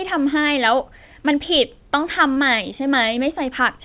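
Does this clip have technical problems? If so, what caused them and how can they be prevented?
Yes, there's a short concealed packet loss at 2.34 to 2.38 s: about 20 ms of speech arrived too late, so the receiver stretched the preceding sound across the gap and crossfaded back, leaving a brief smear. A deeper jitter buffer or forward error correction would prevent it.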